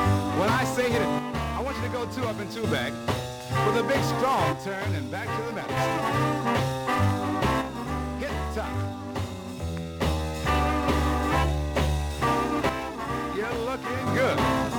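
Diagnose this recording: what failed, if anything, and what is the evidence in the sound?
The level drops abruptly by about 6 dB from 1.19 to 2.64 s, 4.53 to 5.77 s, 7.62 to 10.02 s and 12.69 to 14.07 s, then snaps back. This is one channel dropping out, likely an intermittent connector in the analogue wiring. The sound is otherwise unchanged; only the level falls by exactly the amount lost when one of two identical channels goes silent.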